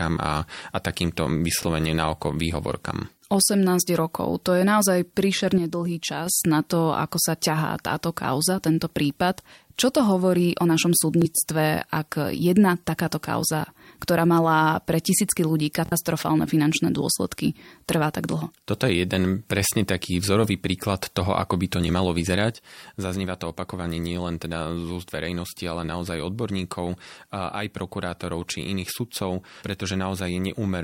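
At 1.63 to 1.66 s there is a short Bluetooth stutter, a brief repeat. A lost or late packet made the receiver replay its last slice, which fits one lost frame of about 23 ms. From 5.58 to 6.26 s, just before "na to ako", the level falls abruptly by about 6 dB and then recovers. This is likely one channel dropping out before the mono sum. At 11.22 to 11.25 s, after "to hovorí o našom", the stutter returns. At 15.86 to 15.93 s it runs longer and sounds more like a machine-gun rattle, fitting about 46 ms of lost audio. After "ako by to nemalo", from 22.54 s to the end, the level again sits about 6 dB lower, likely the same channel dropout.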